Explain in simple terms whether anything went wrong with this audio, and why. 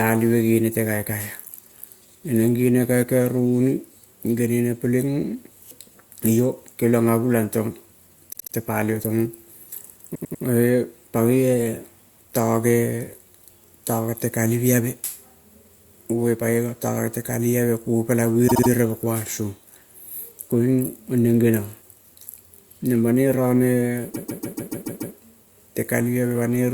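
The speech stutters four times, replaying a tiny slice over and over: at 8.32 to 8.53 s and 18.47 to 18.69 s (a 72 ms snippet played three extra times), at 10.14 to 10.43 s (a 96 ms snippet, three extra times), and at 24.13 to 25.14 s (a 144 ms snippet, seven extra times). These are repeated frames. Chunks of the compressed audio were stored or sent more than once, so the player replays them, which stretches the recording by about 1.7 seconds in total.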